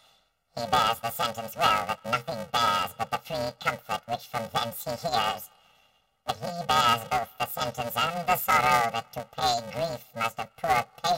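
The whole 11 seconds carries a robotic buzz at about 345 Hz, and it's the classic sign of planar audio read as interleaved. Each block that should be left samples followed by right samples is being read as alternating pairs. So every chunk plays twice at double speed, once from each channel. The blocks are only about 2.9 ms long, which fits 128-sample blocks, so you don't hear a clean octave jump. You get a steady buzz at the block rate laid over the sound.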